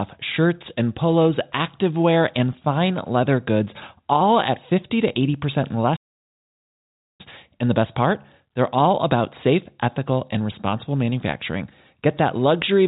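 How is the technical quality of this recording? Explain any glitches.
The speech breaks off at 5.96 s and the audio goes completely silent for about 1.23 s, until 7.21 s, when it resumes mid-flow. This is a playback stall: the player most likely ran out of buffered data or had its output thread held up, so nothing reached the output until it caught up. The speech has no high end above 4 kHz, which points to a narrowband call codec such as G.711 mu-law at 64 kbps.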